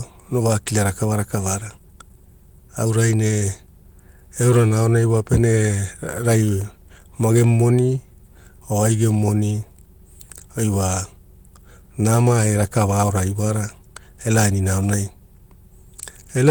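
Clock drift between sender and receiver runs through the whole recording. The sending clock runs about 4 percent faster than the receiving one, so the jitter buffer keeps overfilling. On a waveform this shows as no single dropout, only a steady pressure that forces small edits across the speech.

Repeated timing corrections follow from that drift, from 0.24 s to 16.45 s. The receiver keeps discarding short slivers of audio to keep pace with a stream arriving at 104 percent speed. If heard at all, they come across as faint hiccups or a slightly unsteady tempo. On a spectrogram they appear as tiny, irregularly spaced discontinuities in the harmonic lines.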